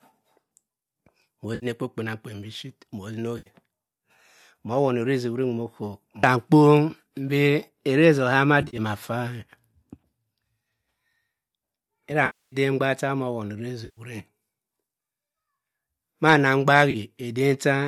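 AAC frame loss with concealment: the decoder lost compressed frames and rebuilt each gap from the last good spectrum. The result is smeared, noisy, phasey patches at 1.55–1.66 s, 3.38–3.49 s, 8.62–8.79 s (about 100 ms lost in short scattered runs), 12.26–12.56 s (the longest, 260 ms), 13.85–14.01 s and 16.91–16.96 s. Faint roughness throughout is likely from light low-delay AAC compression.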